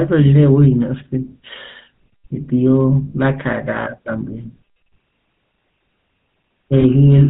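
Throughout, the speech passes through the GSM full-rate codec, which models the vocal tract and excites it with regularly spaced pulses that keep only every third excitation sample. The damage is plainly audible: a gravelly, buzzy roughness with nothing above 4 kHz, consistent with the 13 kbps full-rate coder.

From 6.80 to 6.84 s, a single lost GSM frame, about 20 ms, is concealed by repeating the settings of the last good frame. Because only one frame is lost, there is no fade, just a brief rough, metallic ring before normal decoding resumes.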